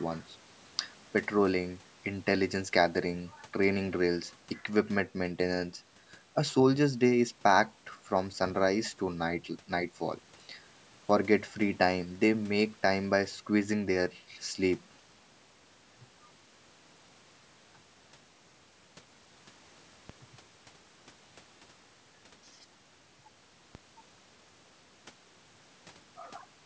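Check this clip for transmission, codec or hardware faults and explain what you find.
Two DC steps are present, at 20.10 s and 23.75 s. At each point the waveform's zero line abruptly jumps to a new offset, as happens when a converter recalibrates or an offset-carrying input is switched in. The offset then bleeds away at the rate of a 20 Hz high-pass, so each step is heard as a brief low thump under the speech, which carries on unaltered. The call microphone processing, with nothing above 8 kHz, plays no part in these thumps.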